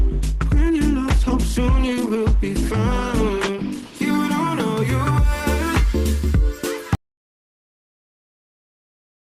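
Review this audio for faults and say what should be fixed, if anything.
Adaptive stream starting at a low bitrate, 0.0 to 4.0 s: the treble is missing above about 12.1 kHz and codec artefacts are stronger, which fits a low-bitrate Opus start before a sudden step up to a much higher rate. Start the player on a higher-bitrate version, or buffer briefly before playback.

Audio dropout to silence, 6.95 s to the end: the sound cuts off into silence with no room tone, likely from a lost input while the encoder kept writing silence. Secure the input connection and monitor levels so a broken link is caught during recording.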